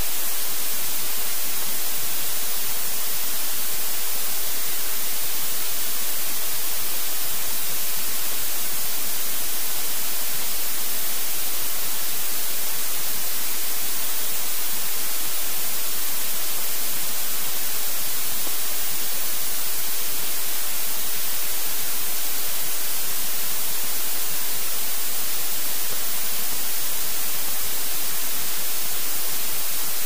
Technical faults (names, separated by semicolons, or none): none